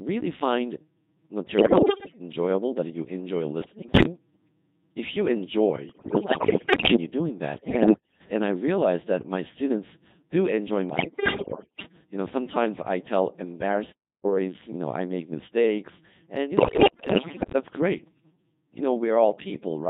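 Robotic, buzzy speech runs through the whole recording, with a flat synthetic quality and no natural waveform detail. That is the Codec 2 vocoder at a setting that sounds like 2.4 kbit/s, with heavy damage. Codec 2 transmits only pitch, voicing, energy and a coarse spectral envelope, and the decoder rebuilds the voice from sine waves. Texture beyond a single clean voice comes out smeared and mechanical.

Six bursts break the speech into bleeps, warbles and garbled robotic syllables, with sudden jumps in pitch, loudness and tone colour. They occur at 1.58–2.20 s, 3.62–4.06 s, 5.90–6.96 s, 7.58–8.20 s just before "and I realized that", 10.90–11.86 s right after "my students do enjoy", and 16.58–17.54 s right after "make mistakes and you". These are bit errors on digital voice radio. Corrupted bits, at rates of roughly one in ten to one in five, scramble the parameters the decoder uses to build each frame. 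The 5.90–6.96 s burst is the worst.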